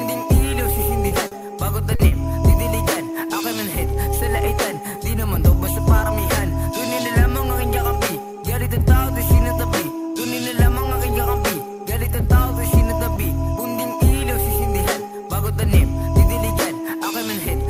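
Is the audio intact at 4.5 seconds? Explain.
Yes, the audio at 4.5 seconds is intact, with no dropout, click, distortion or other fault audible there.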